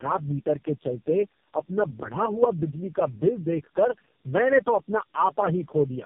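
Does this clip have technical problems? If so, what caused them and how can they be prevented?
Yes: tandem speech coding throughout the clip. The speech sounds like it passed through three low-rate AMR-NB coders in a row, each re-encoding the last one's already damaged output, which compounds the roughness, muffling and warble, with nothing above 3.4 kHz. Keeping the call in one codec end to end avoids this.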